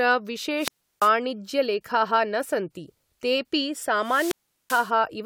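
Wireless microphone squelch dropouts hit at 0.57–1.13 s and 3.95–4.98 s. Each time the radio signal fades, hiss swells, then the receiver mutes the speech for about 340 ms and about 390 ms.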